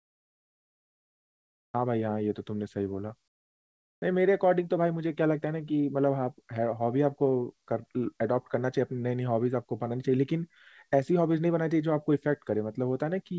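From 0.00 to 1.74 s and again from 3.28 to 4.02 s, the background turns flat and featureless, about 27 dB and 23 dB quieter: comfort noise in place of the background, likely from discontinuous transmission filling pauses with synthetic noise.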